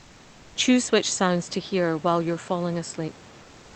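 From 0.00 to 0.55 s, comfort noise stands in place of the background. The real room hiss gives way to a smooth, featureless noise, about 3 dB quieter. The likely cause is discontinuous transmission. The sender paused during silence, and the receiver filled the gap until speech began.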